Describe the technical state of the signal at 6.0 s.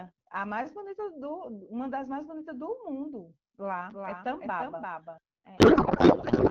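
At 6.0 s the signal is in a codec payload misread, running from 5.57 s to the end at 6.50 s. The AMR-WB decoder is parsing frames with their fields misplaced, which fits octet-aligned packing read as bandwidth-efficient, so the speech becomes garbled noise and warble that barely tracks it.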